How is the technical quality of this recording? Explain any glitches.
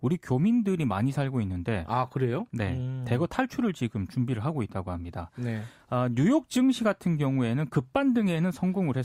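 No glitches can be heard in the recording. The speech continues without any audible interruption or technical fault.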